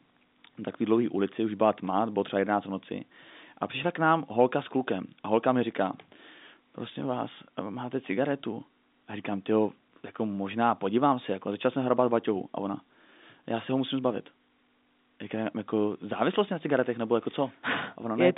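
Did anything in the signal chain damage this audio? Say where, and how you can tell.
No, the speech carries the ordinary G.711 A-law telephone character, with a line band of roughly 200 Hz to 3.7 kHz, nothing above 3.8 kHz, and at most a faint trace of the codec's level-following quantisation noise, which fits a standard 64 kbps call path doing its normal job.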